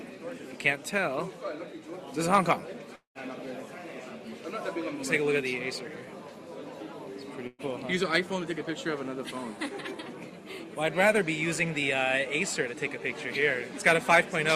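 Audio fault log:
2.95–3.18 s, long network dropout: the sound stretches into a fading buzz or hiss, then silence, and resumes with 200 ms missing; likely the receiver concealing audio that never arrived.
7.47–7.62 s, burst of packet loss: the last sound is held as a fading buzz or hiss for 117 ms, then resumes 120 ms further on, because lost packets were concealed.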